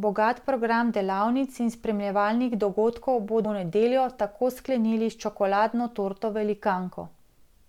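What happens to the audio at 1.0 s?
At 1.0 s the speech carries on intact, with no dropout, click, distortion or other fault at that moment.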